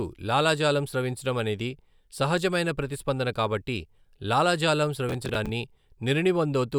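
At 5.09 s, just after "సహజమైన ప్రతిస్పందన కాబట్టి లాలాజాలం", the processor falls behind and misses about ten buffer deadlines, with buffers of around 10 ms. Each miss repeats a hard-edged scrap of old audio, heard as processor overload crackle tearing through the speech until 5.49 s.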